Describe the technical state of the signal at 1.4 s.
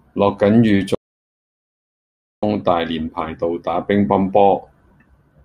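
At 1.4 s the signal is in an audio dropout to silence lasting from 0.95 to 2.43 s: silence with no room tone, likely from lost input while recording continued.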